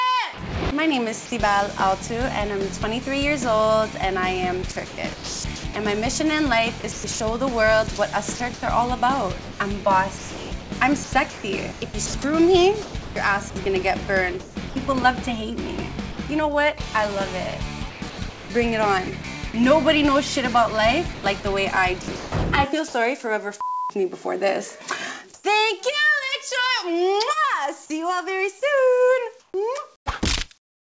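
Between 0.34 and 1.32 s, the sender's voice detector likely switched its transmission on and off several times. This is sound chopped by the voice detector: about 100 ms of the real signal is swapped for comfort noise, so the edges break up. The same choppy flicker returns more heavily from 4.72 to 14.76 s, where about 2.6 s in total is replaced.

From 16.12 to 16.18 s, the detector likely mistook quiet sound for background and stopped sending. This is sound dropped by the voice detector. About 60 ms of real audio is lost, and steady fill noise stands in until the signal resumes.

The chopping recurs at 17.90 to 19.54 s, with about 440 ms replaced, and at 21.14 to 22.94 s, with about 420 ms replaced. In both stretches the sound stutters between the real signal and synthetic noise.

At 25.34 to 25.44 s there is comfort noise in place of the background, likely from discontinuous transmission during a pause. 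The true background, about 33 dB below the loud parts, gives way to a featureless hiss whose level shifts by about 4 dB. The same swap occurs from 29.40 s to the end, covering about 480 ms. Throughout, the audio stops near 8 kHz, as expected from the G.722 call path.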